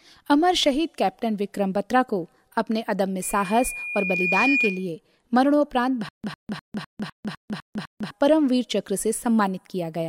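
From 3.22 to 4.90 s there's loudspeaker feedback squeal: the mic catches its own speaker, and a 2.4 kHz tone swells over about a second to roughly 5 dB above the speech. Then from 6.09 to 8.11 s comes a stutter with silent gaps, likely a stalled stream retrying: a 101 ms fragment repeats eight times, each followed by 151 ms of dead silence.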